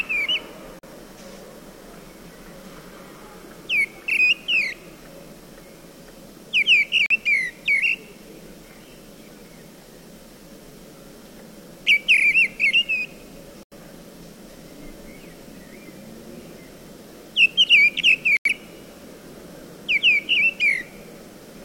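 The clip is a recording of sounds, broken by four digital broadcast dropouts where the audio mutes to silence: 0.79 to 0.88 s, 7.06 to 7.16 s, 13.63 to 13.76 s and 18.37 to 18.50 s. The receiver stops decoding when frames fail, so the lost audio comes in fixed sizes, about 43 ms or 85 ms, which fits one or two lost frames. Unlike a streaming stall, the sound resumes further along rather than where it stopped.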